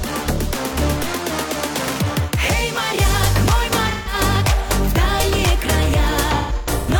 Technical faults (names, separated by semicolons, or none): AAC frame loss with concealment